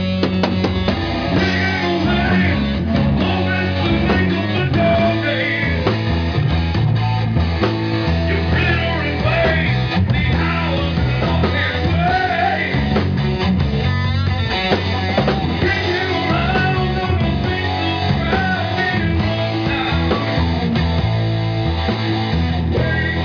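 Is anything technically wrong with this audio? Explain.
No, nothing technically wrong stood out on listening to this audio.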